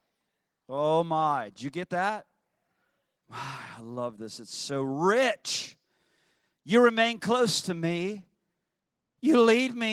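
Nothing in this speech stood out as a technical fault on listening.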